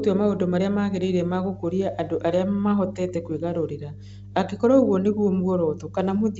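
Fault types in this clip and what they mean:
Mains hum: a steady low 50 Hz tone sits under the speech for the whole clip, at roughly 20 dB below it; it comes from the power line leaking into the signal through a ground loop or nearby transformer.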